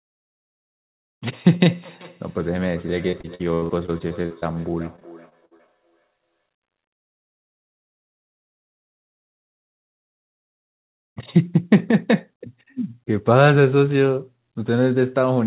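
From 1.65 to 6.44 s there is feedback echo between two devices. A second device in the same room is replaying this signal into the microphone, and the local echo canceller can't remove sound it didn't play itself. Each phrase comes back at roughly 0.4 s intervals, thinner and ringier, peaking about 24 dB below the direct sound. On a spectrogram the speech striations reappear as fainter, regularly spaced copies. The waveform shows low-level tails trailing each syllable.

Inside that stretch, repeated packet loss (robotic sound) hits twice, at 3.08 to 4.44 s and at 4.96 to 5.70 s. The receiver keeps patching short holes by extending the last audio, so the sound turns choppy with pieces missing. The first burst is denser, with about 28% of the span concealed. The second is around 19%. The longest gaps are 80 ms and 56 ms. On a spectrogram this shows as smeared, flat-pitched patches and abrupt breaks. 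In the waveform, repeated cycles alternate with small dropouts. Everything sits below 4 kHz, which fits a G.711 telephone-band path.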